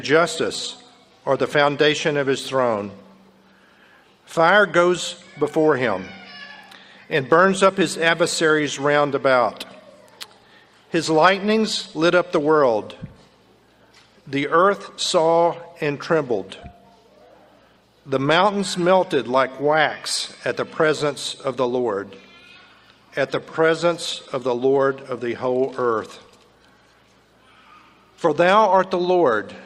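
No technical faults can be heard anywhere in the clip.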